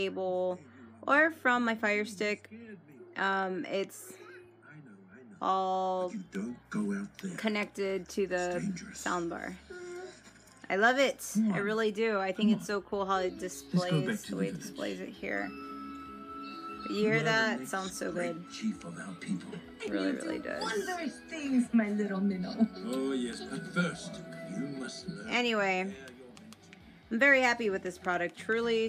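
Nothing technically wrong can be heard anywhere in the audio.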